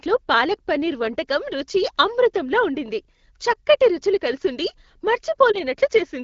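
At 5.52 to 5.56 s the speech briefly dips and warbles. This fits one lost AMR speech frame of about 20 ms: a radio error corrupted it, so the wideband decoder filled the gap by repeating the previous pitch and vocal tract settings at lowered gain.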